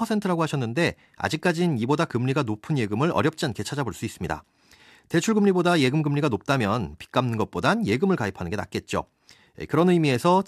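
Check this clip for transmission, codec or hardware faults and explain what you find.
I found no faults to explain in the clip.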